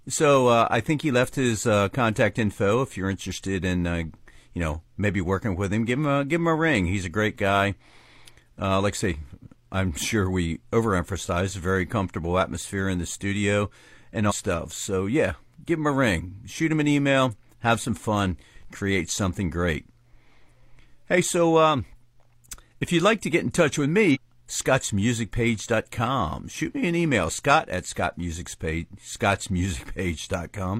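Damaged data in the compressed stream makes the decoder misread frames and lose sync, producing brief garbled bursts in the speech at 14.26–14.33 s and 24.11–24.17 s.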